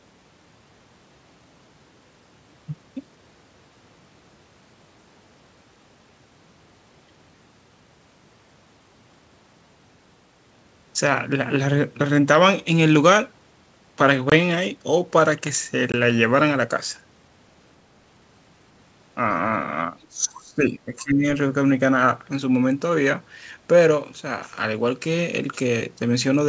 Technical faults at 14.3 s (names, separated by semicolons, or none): packet loss on an ADPCM call